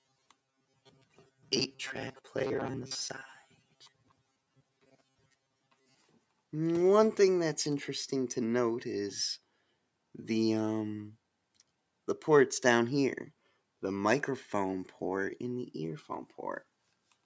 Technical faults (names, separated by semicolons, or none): robotic sound from repeated short buffers; sound cut by the noise suppressor